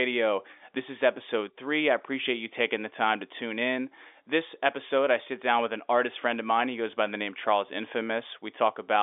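Nothing stood out on listening to this speech recording.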